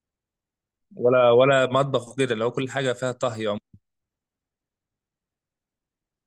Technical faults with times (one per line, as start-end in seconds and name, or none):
2.62-3.60 CD scratch ticks